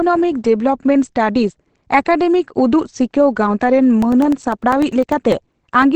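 Across the whole speech clip the sound is muffled and hoarse, with plainly audible coding damage. This points to Opus compression, likely at around 16 kbps in its SILK speech mode. A spectrogram shows a hard ceiling, with nothing above 8.5 kHz.

From 4.02 s to 5.83 s, periodic USB or driver dropouts cut out about a millisecond of audio every 0.1 s, roughly twenty times. The gaps are filled with silence and heard as regular ticks. The waveform shows brief flat gaps, and the spectrogram shows evenly spaced thin vertical lines.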